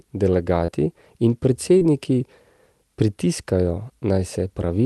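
Short concealed packet loss occurs at 0.65 to 0.72 s and again at 1.78 to 1.82 s. Each time, a stretch of the call, about 20 ms and then about 40 ms, arrived too late to decode, so the receiver extended the preceding sound to cover the hole and blended back in, leaving a brief smear or wobble. The band-limited character of the call path, topping out near 12 kHz, fits an Opus stream around 32 kbps.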